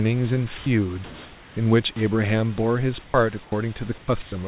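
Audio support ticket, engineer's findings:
Computer activity noise, whole clip. Buzz pulsing around 200 Hz, roughly 30 dB below the speech, present in gaps as well as under speech. Load changes in processor, graphics or mouse modulating the shared audio ground. Differs from mains hum: rate and intensity follow machine activity, not a fixed 50/60 Hz tone, and not the sound itself.

Sound dropped by the voice detector at 0.58–0.66, 1.92–1.96, 3.04–3.14, 3.44–3.52, 3.98–4.08 and 4.22–4.32 s. Speech briefly gives way to steady noise, about 20–70 ms of sound missing each time, then resumes. Likely sender VAD misreading quiet or trailing speech as background, receiver filling with comfort noise. Differs from packet-loss gaps: the filler is smooth steady noise, not clicks or concealment artefacts.

Comfort noise in place of the background, 1.04–1.56 s, roughly half a second. Real room background, about 23 dB below loud speech, replaced by featureless synthetic noise at the same level, so no step in loudness. 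Likely discontinuous transmission during a pause, receiver generating noise shaped like the background. Differs from voice-detector drops: no speech is lost, only background texture; call path band-limited to 4 kHz.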